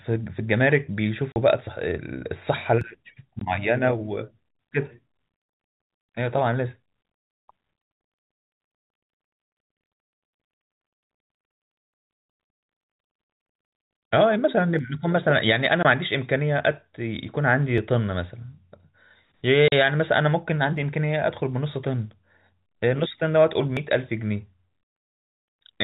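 At 1.32 s the speech drops out for 40 ms, and again at 3.39 s, 15.83 s and 19.68 s (20, 20 and 40 ms). This is packet loss filled with silence. Whole packets never arrived, and the receiver played digital silence in their place. The hole lengths are multiples of 20 ms, which fits 20 ms packets. Each gap is true dead air with abrupt edges, not a skip in the sound.

Brief skips at 2.81, 8.80, 14.79, 17.78, 20.78 and 23.77 s are audio missing between chunks. These instants fall on a 3-second grid, likely from recording or processing in 3-second blocks and losing a few milliseconds at each handover. Each loss is only a few milliseconds, and the two sides butt together with no silence between them. The effect is a tiny jump or tick rather than a hole, and it is much shorter than the packet dropouts.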